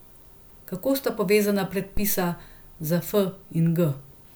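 A phantom power thump hits this speech clip from 1.97 to 2.34 s: a supply switched on or off on a live input sends a deep thump peaking near -15 dBFS, decaying over 84 ms.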